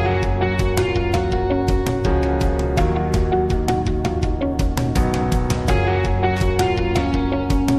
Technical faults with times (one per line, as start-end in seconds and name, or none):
6.36-6.44 loose connector crackle